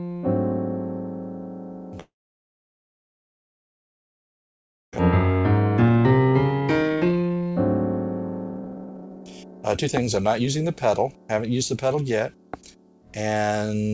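From 2.00 to 5.01 s the audio cuts out in what is likely a long network dropout. The last sound smears into a fading buzz, then roughly 2.8 s of silence, and about 1.6 s of material is lost. On a spectrogram this shows as a brief decaying smear and then an almost empty gap. Two jitter buffer speed-up passes follow, as the receiver works off about 1.2 s of built-up delay by cutting tiny pitch-period slices. From 5.82 to 7.56 s the audio runs at 131% speed, shedding roughly half a second, and from 8.44 to 10.64 s it runs at 135%, shedding roughly 0.7 s. Both sound hurried but keep the same pitch. A spectrogram shows events squeezed closer together in time while the harmonic spacing stays unchanged. Because the audio passes through a G.722 call path at 64 kbps, nothing appears above 8 kHz.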